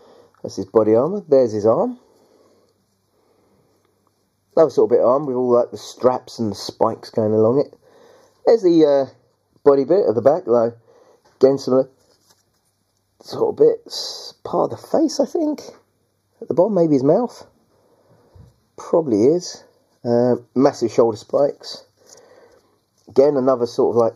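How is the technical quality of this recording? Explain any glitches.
The recording has one persistent fault, a channel delay causing comb filtering across the whole clip. One channel arrives a fraction of a millisecond late, and when the two are mixed to mono their shared content cancels at regularly spaced frequencies, starting near 3 kHz, leaving the audio hollow and phasey.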